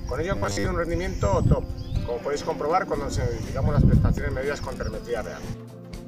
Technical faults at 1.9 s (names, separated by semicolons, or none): none